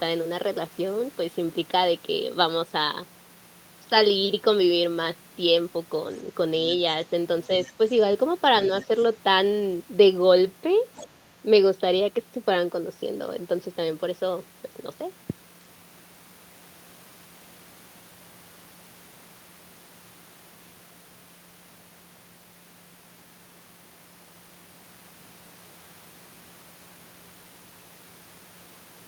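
The other side's voice leaking through can be heard in this speech recording at 6.68–6.76 s, 7.49–7.72 s, 8.75–9.05 s and 10.95–11.15 s, as brief faint scraps of a second voice sitting roughly 25 dB below the main talker, rising to about 20 dB below in the last one. The likely cause is the far end's audio playing from the talker's loudspeaker into the microphone, with the echo canceller leaving part of it behind.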